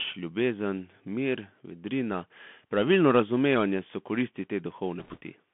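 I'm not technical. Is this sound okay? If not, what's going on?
No. The whole clip has been through a Bluetooth CVSD headset codec, the basic narrowband codec a wireless headset uses for calls. It describes the sound one step at a time, each tiny step simply up or down, and keeps almost nothing above a telephone-like range. Here that loss is plainly audible: the speech sounds thin and boxed-in, s sounds come out scratchy, and a fine grainy hiss sits underneath.

Near the end, from about 5.00 to 5.19 s, just after "pravilno razumevanje so koristi", there are bit errors on a Bluetooth voice link. A couple of bits in every hundred were flipped on the link. Because no single bit matters more than another and the mistakes fade out quickly, you won't hear sharp clicks. Instead, that short stretch picks up a brief rushing, crackly noise over the speech.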